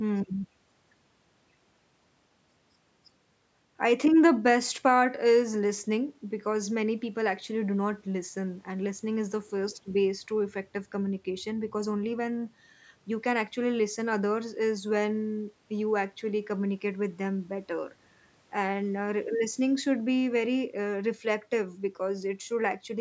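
Speech with no technical faults.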